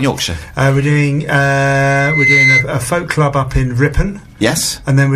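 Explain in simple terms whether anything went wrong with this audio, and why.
Loudspeaker feedback squeal, from 1.75 to 2.67 s: the microphone hears its own loudspeaker, and a 2.1 kHz tone builds up over about half a second into a shrill whistle.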